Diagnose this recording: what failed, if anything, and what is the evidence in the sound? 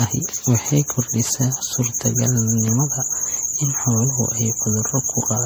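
The codec stage is the likely culprit: the speech appears to have been through repeated lossy encoding, consistent with an MP3 chain at 64 kbit/s run several times over, around four passes. That is generation loss. Each decode and re-encode quantises again on a shifted frame grid, so noise and spectral gaps pile up. Across the whole clip the speech sounds swirly and hollow, more smeared than 64 kbit/s alone would give, and consonant attacks blur.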